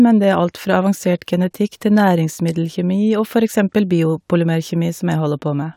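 No technical faults can be heard anywhere here.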